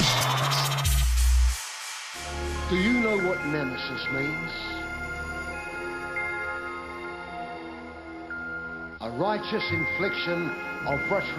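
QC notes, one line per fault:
Nothing to flag here; the audio holds up fine all the way through.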